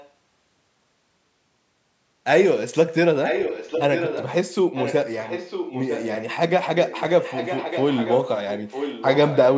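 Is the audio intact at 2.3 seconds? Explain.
Yes, the speech is intact at 2.3 seconds, with only the ordinary call microphone processing audible, its high-pass filter trimming the lowest bass and nothing heard above 8 kHz.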